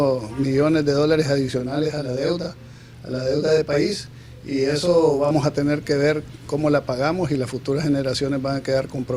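From 1.60 s to 5.31 s the audio sounds doubled, with a second, equally loud copy trailing close behind like a tight slap echo. This is channel delay (doubling): one channel runs 40 ms late, and summing both to mono exposes the lagging copy.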